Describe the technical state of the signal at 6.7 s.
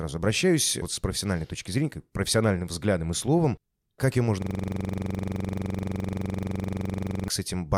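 At 6.7 s the sound is a rapid, rattling buzz at 23.4 Hz. This is a system hang loop from 4.42 to 7.28 s: a frozen system kept replaying one 42.67 ms buffer, which fits a 2048-sample ring buffer.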